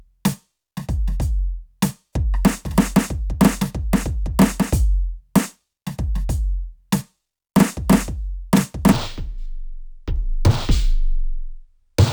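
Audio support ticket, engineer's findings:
From 8.92 s to end of clip (12.12 s): music drops to half speed, a full octave low, faint mirrored image in upper half of spectrum. Stereo read as mono: interleaved left/right samples consumed sequentially as one channel by decoder or format-parsing stage.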